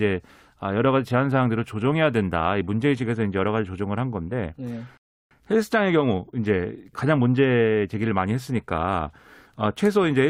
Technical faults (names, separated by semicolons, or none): rebuffering stall